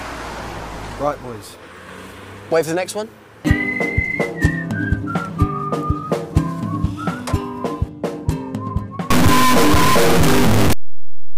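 A stuck bit from 9.10 s to the end brings harsh, buzzy distortion, likely a fairly high data bit held fixed, shifting about half the samples.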